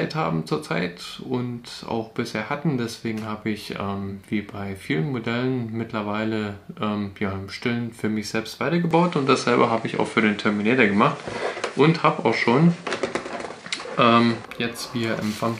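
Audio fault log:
8.91–14.45 s, input switched to a poorer device: sound turns duller, with nothing above 10.5 kHz, about 5 dB level shift and new noise, likely another microphone.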